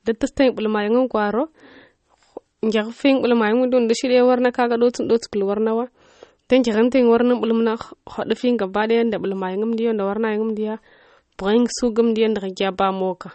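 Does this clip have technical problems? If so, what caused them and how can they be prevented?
Yes. Throughout, the speech has a hard treble ceiling at 8.4 kHz, with watery, swirling artefacts and smeared consonants, likely from MP3 compression at a low bitrate near 32 kbps, where the encoder discards high frequencies and weak spectral detail. Encoding at 128 kbps or higher, or keeping a lossless master, prevents this.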